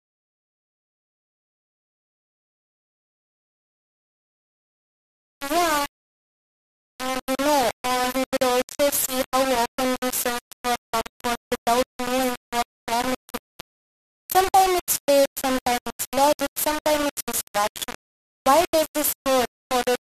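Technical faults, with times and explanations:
Throughout, low bit depth without dither: speech is coarse and grainy, the grit tracking each syllable, with error roughly 10 dB below the signal. Likely three-bit rounding.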